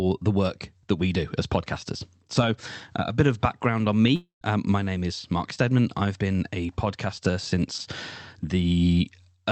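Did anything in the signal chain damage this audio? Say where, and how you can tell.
Yes, at the network stage. After "bit of background on", from 4.15 to 4.43 s, the sound decays into a fading buzz, then 130 ms of silence, then resumes with a gap. This is likely a long network dropout concealed by the receiver.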